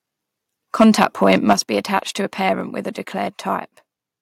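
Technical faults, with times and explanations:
0.80 to 1.53 s, microphone overload: The loudest syllables here come out harsh and crackly. That's likely the mic input being set too hot, so peaks ran about 6 dB past what the converter could represent and got their tops sheared flat. Only a small slice of the audio is affected, around one and a half percent of samples, but each flattened peak adds a burst of new upper harmonics, which is where that gritty edge comes from.
1.53 s, microphone volume stepped down: Just before "be attached to a", both the voice and the room behind it drop by about 6 dB in a single jump, with no fade. It's likely the call software reacting to the overload that just happened. It saw the input clipping and cut the device's input volume in one step. That's why the drop lands right where the distortion stops and doesn't creep in gradually.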